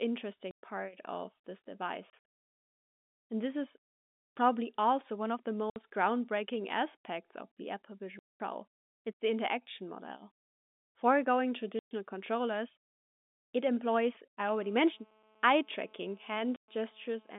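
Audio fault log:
0.51 to 16.68 s, packet loss filled with silence: six dropouts at 0.51 to 0.62 s (just before "part of this"), 2.10 to 2.24 s (just after "part of this", about 210 ms lost in pieces over 300 ms), 5.70 to 5.76 s (between "also one of the" and "groundbreaking aspects of the"), 8.19 to 8.40 s, 11.79 to 11.91 s and 16.56 to 16.68 s. The gaps run 60, 120 or 210 ms, all multiples of 30 ms, which points to 30 ms packets. Each missing stretch is replaced by digital silence, so the sound stops dead and restarts.
14.63 to 17.34 s, GSM phone buzz: a hard, raspy buzz at 217 Hz with a dense stack of harmonics, about 33 dB below the signal. It holds steady across the whole stretch, which fits a nearby 2G handset in a call. Its radio bursts are rectified in the audio circuitry and enter the path as a pulse train. The buzz has no relation to the programme.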